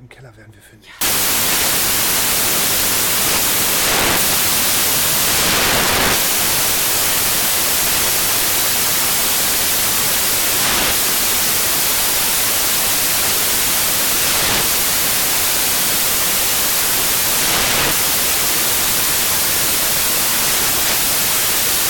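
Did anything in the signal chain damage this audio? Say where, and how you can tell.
Yes, at sample-format conversion. From 1.01 s to the end, samples built from the wrong bytes become loud, harsh broadband noise because misordered bytes let the fast-changing low bits dominate each value.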